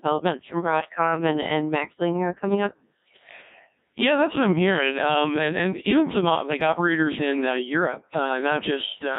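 Speech, heavily damaged throughout by a Codec 2 vocoder: voices sound robotic and buzzy, rebuilt from sine waves carrying only pitch, voicing, energy and envelope, and the thin sound points to about 1.6 kbit/s. A spectrogram shows smeared harmonic stripes confined to 150 Hz to 3.7 kHz, and the waveform loses its original shape.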